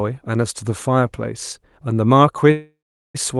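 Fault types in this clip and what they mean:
Call audio freeze: at 2.51 s the speech stalls and fades into silence, resuming at 3.17 s with nothing lost, likely from delayed packets emptying the jitter buffer.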